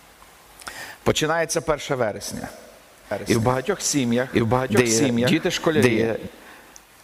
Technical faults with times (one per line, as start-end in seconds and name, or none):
3.11-6.27 doubled audio track